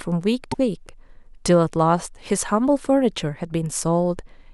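At 0.51 to 0.55 s the speech skips forward and the next 42 ms come out garbled. This is likely a broken MP3 bit reservoir: after frames went missing, the following frame decoded borrowed bytes from the wrong frame. The span fits MP3 frames of about 26 ms.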